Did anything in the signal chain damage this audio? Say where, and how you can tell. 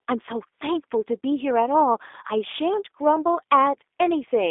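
Yes, codec stage: G.729 codec damage throughout. Nothing passes above 3.7 kHz, plus a rough, synthetic texture that mere band-limiting wouldn't cause, fitting 8 kbit/s coding.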